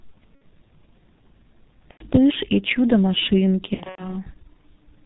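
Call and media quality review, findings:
G.723.1 codec, whole call. Speech muffled and hoarse, nothing above 4 kHz. Consonants smeared, heavy codec damage. Fits the 6.3 kbit/s mode with 30 ms frames. Slow model updates blur fast transitions. Probable component: narrowband low-rate voice codec on the media path.

VoIP packet loss concealed by the speech codec, 0.35–0.44 s and 1.91–2.05 s. Sound stretches into buzzy tone or coloured noise, then fades. Decoder extrapolating last pitch and filter. Gaps fit two and three lost 30 ms frames.

Same fault, 3.74–4.17 s. Scattered losses, about 180 ms in total, longest run 90 ms. Repeated smearing and weak speech. Recovery lags after packets return. Probable component: network packet loss upstream of decoder.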